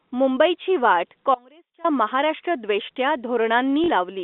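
At 1.35 s, just after "मुंबईची वाट", the speech drops out to a faint residue for about 0.5 s until 1.84 s. It likely comes from a brief signal loss with the path still live. On the waveform the envelope falls abruptly to a thin trace roughly 25 dB down, and the spectrogram shows a sharp-edged pale gap, not a taper.

From 3.84 to 3.88 s, packet loss with the last packet repeated replaces 40 ms of audio, which fits two 20 ms packets. The replayed stretch gives a short robotic stutter. The waveform shows two identical copied blocks, and the spectrogram shows a brief buzz banding inside the 250 Hz to 3.6 kHz telephone band.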